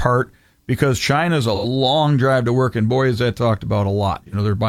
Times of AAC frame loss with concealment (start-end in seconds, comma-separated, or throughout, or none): 1.54-1.66, 4.27-4.34